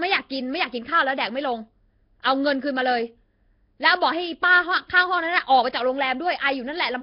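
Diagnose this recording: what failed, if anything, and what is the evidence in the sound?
The codec stage failed throughout this speech, with heavy damage: a rough, hissy halo, a smeared underwater quality, and nothing above 5.3 kHz. The likely cause is Nellymoser compression at roughly 22 kbps, filling starved bands with noise. A spectrogram shows a hard ceiling and blotchy noise between harmonics.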